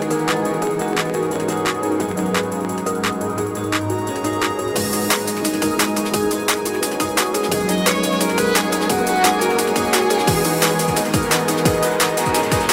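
A train of clicks runs from 0.02 s to 2.66 s, roughly fifteen pulses at about 5 per second, spaced unevenly rather than in a steady rhythm. Each click has much the same sharp shape and stands out well above the sound, peaking around 10 dB over it, so the opening reads as an irregular popping or ticking laid over the audio. The likely cause is interference from nearby equipment or a faulty connection or power supply.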